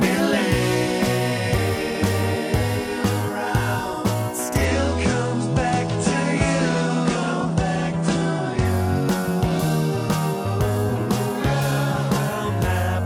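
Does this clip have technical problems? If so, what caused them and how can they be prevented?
Yes. From 4.65 to 8.65 s the treble suddenly vanishes above 9.8 kHz and smeary codec artefacts rise without any gap: an adaptive stream at a lower bitrate, switched down when the connection slowed. Prevent it with a steadier connection, a larger playback buffer, or a higher minimum bitrate setting in the player.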